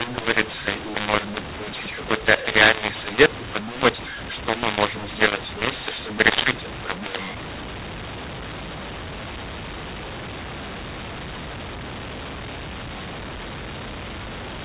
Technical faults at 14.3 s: mu-law and A-law mixed up

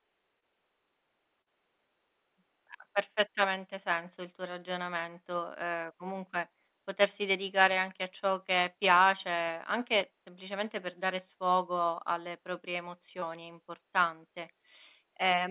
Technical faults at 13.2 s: short concealed packet loss

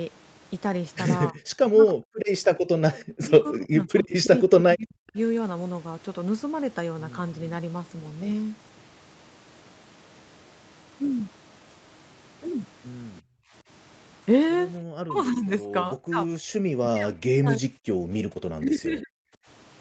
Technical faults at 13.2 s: echo leak; background gated by the echo canceller

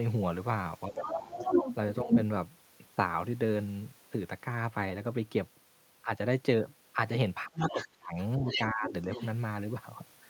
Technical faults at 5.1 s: none

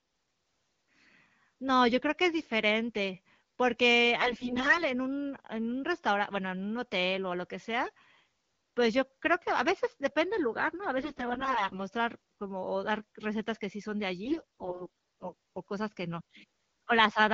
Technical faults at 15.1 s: AMR bit errors

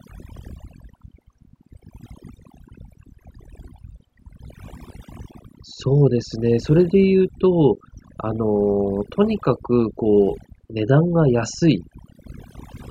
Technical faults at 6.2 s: overdone noise removal

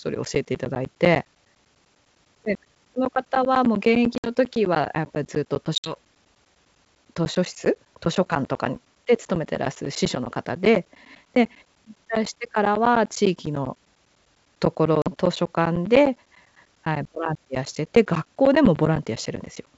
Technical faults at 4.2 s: periodic USB or driver dropouts; packet loss on an ADPCM call

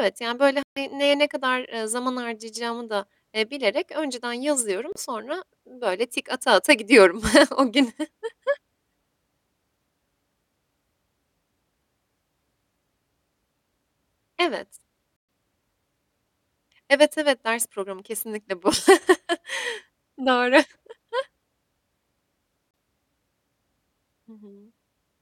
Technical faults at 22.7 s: Bluetooth dropout

